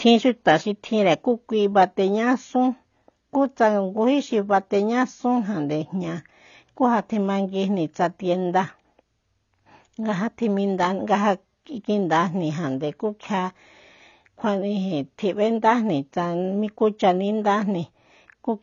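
From start to finish the speech sounds dull and smeared, with nothing above 7 kHz, and sibilants and held vowels carry a plainly audible warbling, fizzy texture. The likely cause is AAC compression at a low bitrate, with damage consistent with AAC-LC at around 24 kbps. With so few bits, the encoder drops the cut-off and starves the upper bands, leaving gaps in the spectrum that turn the fine detail watery and unstable.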